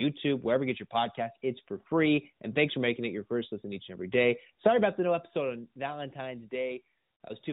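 Speech carried over an AMR narrowband mobile codec, band-limited to below 4 kHz as that path dictates, with no technical faults to report.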